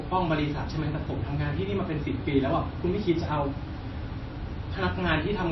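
A speech recording with MP3 compression throughout, likely encoded at a starved bitrate around 24 kbps. Short of bits, the encoder cut the treble flat at 5.8 kHz and dropped weak frequency lines frame by frame, leaving the voice dull, watery and swirly, with smeared consonants.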